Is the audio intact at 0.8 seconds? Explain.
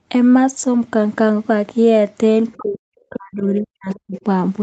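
Yes, the speech at 0.8 seconds is intact, with no dropout, click or distortion, only the expected call-path band limit that leaves nothing above about 8 kHz.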